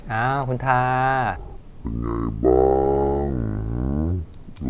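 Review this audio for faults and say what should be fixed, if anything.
From 1.36 s to the end, the speech drops a full octave and runs at half speed, a wrong sample rate fault, where material recorded at 16 kHz plays back at 8 kHz with no conversion. To prevent it, carry the sample rate through the chain and resample wherever rates differ.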